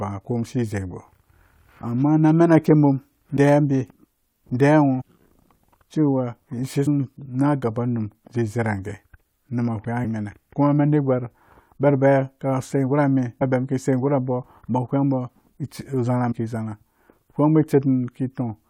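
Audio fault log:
3.36, 5.0, 6.86, 10.04, 13.41 and 16.31 s: compressed frames skipped. At each point the speech jumps forward, losing whole blocks of the encoded stream, each 21.3 ms long, that were missing or rejected as damaged by the decoder. Most jumps drop roughly a tenth of a second or less. The one at 10.04 s loses about a third of a second.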